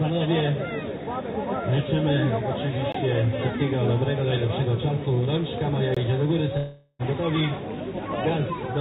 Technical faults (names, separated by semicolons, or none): gap between chunks; long network dropout